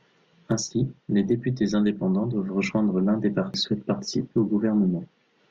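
At 3.54 s, just after "doivent rejoindre l'un des", damaged data in the compressed stream throws the decoder out of sync, producing a brief glitch in the speech.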